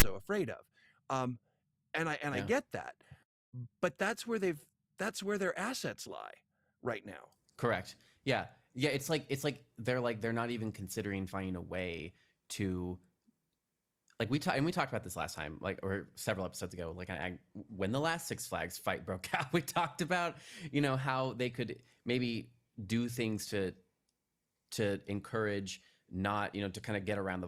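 A harsh, loud rasp of static with hard edges opens the clip at 0.00 s, gone just before "afraid of". This is file tags played as audio: a block of text metadata was decoded as samples, and its character bytes form a lopsided, buzzing waveform.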